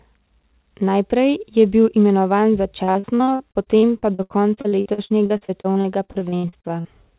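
From 2.84 s, just after "je bil imenovan", to 6.88 s the speech breaks up with repeated packet loss, giving a robotic sound. Dozens of short holes, none longer than 75 ms, are patched by stretching the preceding sound, so about a third of the span is synthetic fill. The result is a choppy, robotic stutter over four seconds, not the single dropout of an isolated lost packet. The whole clip also stops at 4 kHz, which fits a narrowband G.711 call path.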